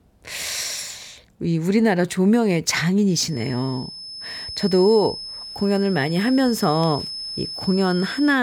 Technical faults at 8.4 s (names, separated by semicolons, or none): feedback whistle